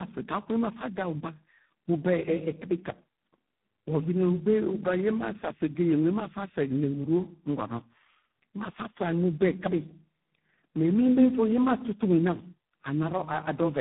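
Tandem speech coding runs throughout: the speech passed through three successive codecs, each degrading the last, leaving it rough, warbly and muffled, with nothing above 3.8 kHz.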